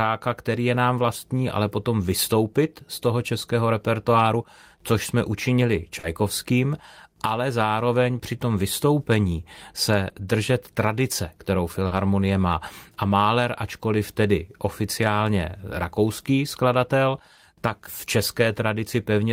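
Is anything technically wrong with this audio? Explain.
Yes. Brief smears break into the speech at 5.99–6.05 s, after "repertoáru což jsme učinili"; at 10.09–10.13 s, between "při tom vystoupení se" and "držet tradice kterou"; at 11.87–11.93 s; and at 17.35–17.39 s, between "tedy oficiálně rakouský skladatel" and "tak v". This is short concealed packet loss. Pieces of 40, 20, 40 and 20 ms arrived too late to decode, so the receiver stretched the preceding sound over each gap before blending back into the real audio.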